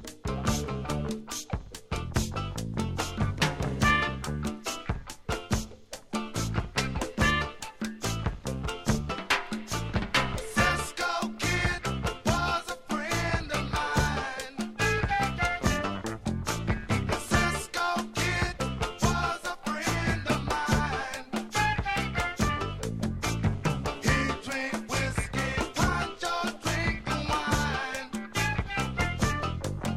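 No technical faults can be heard anywhere in this recording. The audio runs without interruption, with no dropouts, clicks, distortion or timing problems.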